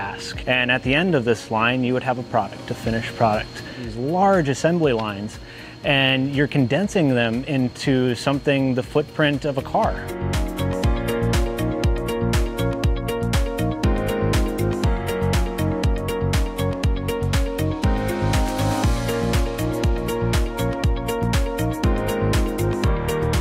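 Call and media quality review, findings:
No findings in this call and media quality review.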